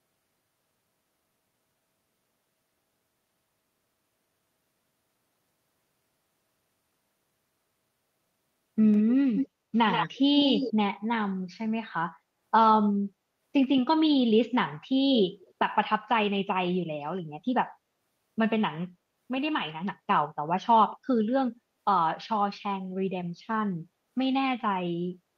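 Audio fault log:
8.92–10.73 s: echo leak in four bursts, at 8.92–9.02, 9.35–9.48, 9.91–10.18 and 10.38–10.73 s. A copy of the speech trails it by 130 ms. It is faint at first, then strong, only about 5 dB under the speech. The likely cause is a loudspeaker at the far end whose echo canceller let its microphone pickup return.
15.17–15.53 s: echo leak in two short scraps, at 15.17–15.22 and 15.41–15.53 s. The same 130 ms delayed copy comes back. The first scrap is moderately audible and the second barely there, near 30 dB down. This is likely the same uncancelled loudspeaker return.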